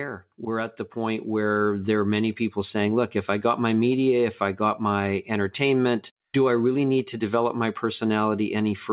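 From 0.37 to 1.93 s, just before "are many people saying", the level climbs by about 6 dB as automatic gain rising takes hold. The gain control judged the input too quiet and raised its gain gradually over about a second and a half. What separates this from a talker leaning closer is that the background noise swells in step with the speech, so the whole signal lifts together. All of it sits in narrow telephone-band audio with nothing above 4 kHz, as the call path carries it.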